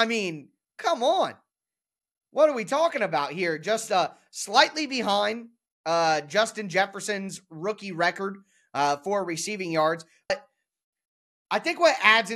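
At 10.30 s, just after "uh for receiving yards", compressed frames were skipped: the decoder never played a run of frames, likely about five of 26.1 ms each. The speech jumps ahead by roughly 150 ms.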